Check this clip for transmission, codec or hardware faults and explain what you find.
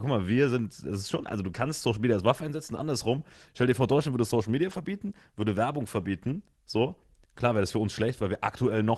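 One kind of fault turns up twice: lost packets rebuilt from error correction.

Lost packets rebuilt from error correction, 4.67–4.77 s and 6.25–6.27 s: the audio dropped out, but the following packets carried low-bitrate backup copies, which the decoder played instead, so no gap appears. Those stretches sound briefly rougher and noisier. The first span fits three lost 20 ms packets, the second a single one, all within the Opus call path's roughly 12 kHz band.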